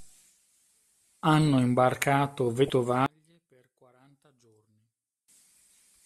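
Damaged data in a compressed stream at 2.67 to 2.70 s: corrupted bytes make the decoder misread these frames and lose sync until it finds the next valid header, leaving a brief glitch of about 30 ms.

From 3.06 to 5.28 s the speech falls away by about 37 dB, leaving only a faint residue. This is likely one channel inverted: with reversed polarity, the centred voice common to both channels cancels when they are summed to mono.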